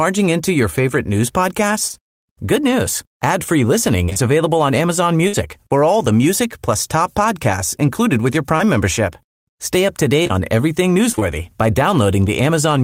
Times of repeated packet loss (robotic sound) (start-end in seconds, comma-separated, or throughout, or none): 4.05-4.18, 10.23-11.23